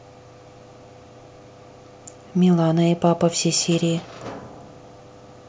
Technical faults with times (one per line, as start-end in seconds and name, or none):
none